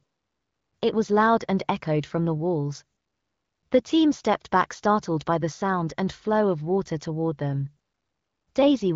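No technical faults are audible.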